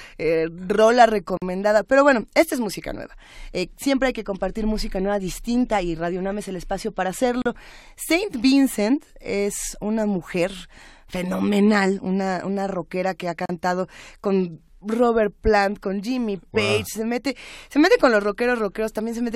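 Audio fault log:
1.37 to 13.49 s: gap at a join of encoded pieces, every 6.0 s (1.37, 7.42, 13.46 s), about 37 to 46 ms, after "eh rola", "el espacio para", "una rockera que ha"; separately encoded segments joined with untrimmed encoder delay and end padding open short silences in the speech.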